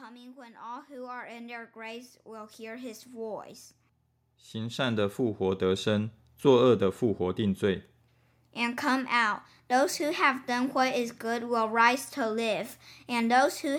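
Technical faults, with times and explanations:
0.33–3.52 s, automatic gain rising: the gain control judged the input too quiet and raised it by about 14 dB, so speech and background swell together.
4.29–5.92 s, automatic gain rising: another gradual boost of about 7 dB lifts the speech and room noise together in a smaller swell.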